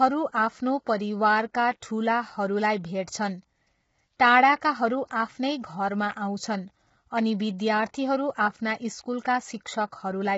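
From start to end the speech sounds rough and grainy, with noise between the pitch harmonics and nothing above 7.7 kHz. Heavy low-delay AAC compression is the likely cause. Its short frames resolve harmonics poorly, which fits AAC-ELD near 16 kbps, unlike ordinary AAC's smeared swirling.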